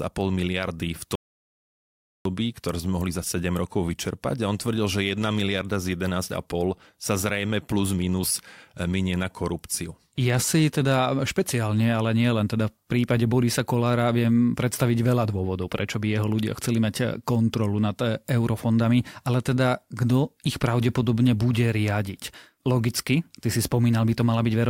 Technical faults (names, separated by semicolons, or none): audio dropout to silence